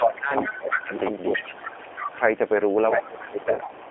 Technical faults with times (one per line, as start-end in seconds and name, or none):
0.00-3.90 doubled audio track
0.00-3.90 G.729 codec
0.00-0.93 speech suppressed in double talk
0.46-0.98 other side's voice leaking through
1.35-2.21 speech suppressed in double talk
2.95-3.90 speech suppressed in double talk
3.36-3.43 other side's voice leaking through
3.54-3.71 VoIP packet loss concealed by the speech codec